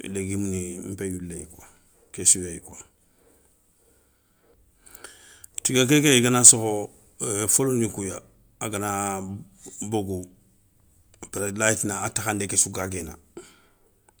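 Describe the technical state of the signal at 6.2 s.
At 6.2 s the speech signal is intact, with no dropout, distortion or other fault audible at that point.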